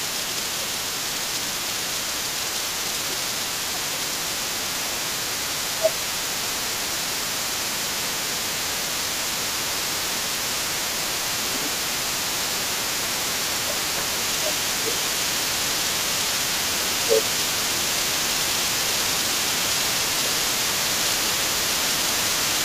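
From the start at 0 s and throughout the clip, the other side's voice leaks through underneath the talker. It sits roughly 10 dB below the main speech. The likely cause is an echo canceller that did not fully remove the far end's loudspeaker playback from the microphone signal, so the residual echo rides along with the near talker.

Overlapping with that, the speech is suppressed in double talk from 0.0 to 10.23 s, then again at 11.33 to 11.76 s, 12.35 to 15.78 s and 16.66 to 22.1 s. During these spans the talker's level dips. The deepest drops are about 15 dB in the first and third spans, about 20 dB in the brief second one, and about 10 dB in the last. This likely comes from the echo canceller failing to separate near speech from echo while both sides talked, and attenuating both.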